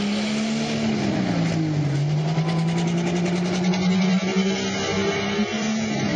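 At 3.64 s the sound switches abruptly, with no gap, to an adaptive stream at a lower bitrate. Codec artefacts rise, and nothing remains above 7.4 kHz until the end, which fits a drop from about 96 to 16 kbit/s.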